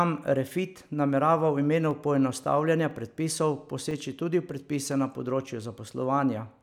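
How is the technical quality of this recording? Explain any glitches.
The recording has a recurring glitch. Periodic USB or driver dropouts occur from 0.91 s to 5.92 s, once every 1.0 s: a blocked driver briefly silences the speech for about a millisecond each time, producing regular clicks. The waveform shows tiny flat gaps, and the spectrogram shows thin vertical broadband lines.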